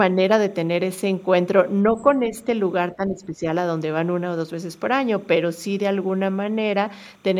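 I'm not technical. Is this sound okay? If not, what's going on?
No, there are a few problems. Running through the whole clip is timecode bleed: a faint, steady chirping warble behind the speech, switching between two pitches around 1 and 2 kHz. It sounds like a sync signal, running at 29.97 frames per second, leaking in from a nearby cable or track.

From 1.95 to 2.14 seconds, you can hear the other side's voice leaking through. A faint second voice slips in underneath, most likely because the talker's speaker was playing the call and the echo removal didn't catch all of it.

Then the main voice gets pushed down: speech suppressed in double talk. There's a slight dip from 2.29 to 2.47 seconds and a clearer drop from 2.93 to 3.44 seconds. Both sides were likely talking at once, so the echo processing turned everything down.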